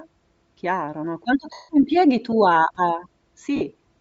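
Throughout the speech there is a breathy, grainy edge on the upper frequencies, noise standing in for lost detail rather than a clean band cut-off. This is likely Bluetooth LC3 compression at a bitrate around 32 kbps. From 1.53 to 1.69 s, just before "impieghi tu a a", the 160 ms of lost LE Audio frames turn into a noisy smear of the preceding sound that fades away rather than dropping to silence. A shorter 50 ms smear follows at 3.56 to 3.62 s, right after "impieghi tu a a".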